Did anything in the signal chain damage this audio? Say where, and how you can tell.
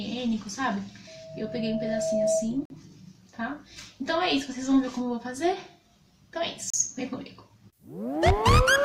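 Yes. First, a loudspeaker feedback squeal at the acoustic stage: from 1.07 to 2.52 s a single 645 Hz tone swells up over about a second to around 5 dB above the programme. The mic is hearing its own speaker, and that one frequency's loop gain is running above unity.

Second, gaps between stream segments in the network or streaming playback path: hard-edged silences at 2.65–2.70 s (47.6 ms) and 6.70–6.74 s (34.9 ms), about 4 s apart. That fits 4-second segments whose timestamps don't quite meet, so the player pads with silence. Nothing's actually lost.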